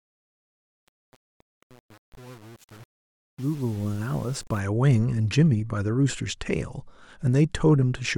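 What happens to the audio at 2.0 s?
At 2.0 s you're right in the middle of truncation distortion on a fade, which runs from the start of the clip to about 4.6 s. The fade was applied without dither, and the coarse grain points to a stage keeping only about 7 bits. The quiet waveform collapses into a few square steps, so the fade sounds gritty throughout that span.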